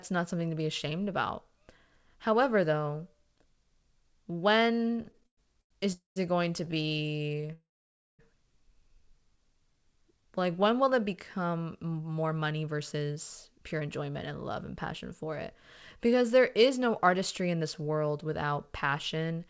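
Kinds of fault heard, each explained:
repeated stalls (stutter): Packets kept showing up late, so the jitter buffer ran dry over and over and the receiver kept stretching the last sound. You hear it from 4.92 to 5.72 s, 11 gaps up to 110 ms, just before "is it going to", then 23 tiny catches right after it.
call audio freeze: The buffer empties completely, most likely because packets got held up in transit, so the last sound is carried on briefly and fades out before the audio resumes where it left off. There's one at 5.92 s (235 ms) and a longer one at 7.53 s (660 ms), mostly silent.
jitter buffer slow-down: The receiver pads out its reserve by repeating single pitch periods, so the sound drags without dropping in pitch. From 9.19 to 10.64 s, leading into "will it become", it runs at about 92% speed, gaining 126 ms and sounding a little drawn out.
jitter buffer speed-up: Here the buffer is holding too much, so the receiver trims out tiny pitch-period slices to catch up, making delivery feel rushed while the pitch stays put. 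It runs at 108% from 11.99 to 14.62 s and 107% from 15.96 to 19.45 s, dropping roughly a fifth of a second each time.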